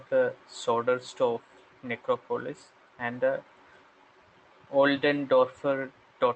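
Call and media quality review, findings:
No faults found; call path audio as expected.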